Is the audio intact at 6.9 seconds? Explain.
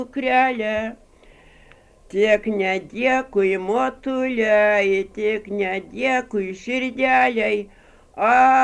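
Yes, at 6.9 seconds the audio is intact, with no dropout, click, distortion or other fault at that point.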